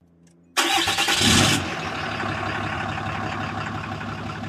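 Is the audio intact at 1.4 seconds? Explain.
Yes, the audio is intact at 1.4 seconds, with no dropout, click, distortion or other fault at that moment.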